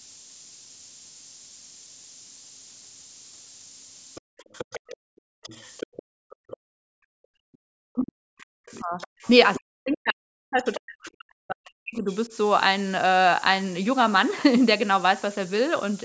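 Throughout the recording the speech carries heavy low bit depth with noise shaping. The sound appears to be quantized to about 6 bits, and the rounding error has been pushed upward in frequency rather than left flat. The result is a constant, thin hiss that climbs steeply toward the top of the band, which ends at 8 kHz from the call's microphone processing. That hiss sits only slightly below the speech level, so it is present under every syllable.

From 4.15 to 6.57 s a second, quieter voice runs under the talker, roughly 15 dB down. This is the other side's voice leaking through, likely because far-end loudspeaker playback reached the microphone and the echo canceller did not fully subtract it. Within that stretch the room sound is briefly cut between 4.21 and 4.37 s, for about 150 ms. It is cut again from 4.97 to 7.64 s, with about 2 s of the span affected. This is background gated by the echo canceller: while it judged the loudspeaker active, it pulled the microphone path down by up to about 40 dB, so the ambience drops to near silence and then returns when the canceller releases.

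A very faint scrap of the far-end voice, around 40 dB below the speech, appears from 7.53 to 7.58 s.

From 7.92 to 12.32 s the talker's own voice repeatedly dips and breaks up, sometimes falling very deep. About 3 s of that span is affected. This is speech suppressed in double talk. The likely cause is that both sides spoke at once and the canceller, unable to separate the near talker from the echo, attenuated everything. During this same window, leakage of the other side recurs from 8.4 to 9.97 s at roughly 20 dB down. A short burst follows at 10.74 to 10.8 s at roughly 15 dB down.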